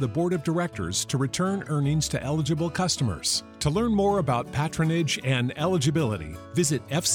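From 2.74 s to 5.29 s a faint, steady ticking sits under the sound at roughly ten ticks per second, well below the main signal. This is Wi-Fi interference. A nearby Wi-Fi radio transmits a beacon every 102.4 ms, and the audio circuit rectifies that radio-frequency energy into an audible click on each beacon. The regular spacing gives the ticking its even, clock-like rhythm, and it stops cleanly at 5.29 s.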